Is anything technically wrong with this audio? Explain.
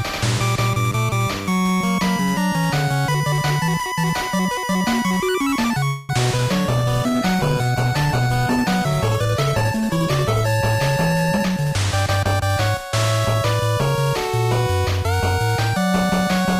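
Yes. From 5.87 to 6.11 s a call audio freeze, likely packets stalling in transit and draining the jitter buffer, stretches the last sound into a fading buzz for about 216 ms before the audio resumes where it stopped.

From 6.37 to 6.40 s, short concealed packet loss: about 20 ms of audio arrived too late to decode, so the receiver extrapolated across the hole, leaving a brief smear or wobble.

From 6.78 to 13.66 s a call bitrate drop cut the encoder from 128 to 19 kbps after the bandwidth estimate fell, making the sound coarse and muffled, worst for nearly 4 s.

From 11.32 to 13.35 s a jitter buffer speed-up trimmed pitch-period slices to shed surplus delay, roughly a fifth of a second in total, so the sound runs about 11% fast at unchanged pitch.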